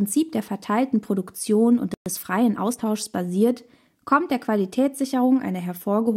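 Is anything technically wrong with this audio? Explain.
Yes. The speech cuts out for about 120 ms, from 1.94 to 2.06 s, a sudden silence in mid-flow before the sound resumes. This is a playback stall. The gap most likely came from the player running short of buffered data, or from its audio thread being held up, so nothing reached the output until it recovered and picked up again.

From 2.06 to 2.86 s the speech sounds rushed but keeps its normal pitch. This is time-compressed catch-up. Having fallen behind during the stall, the player clears its backlog by dropping short slices of audio and cross-fading across the joins. Here that yields about 1.15 times normal speed over roughly 0.8 s.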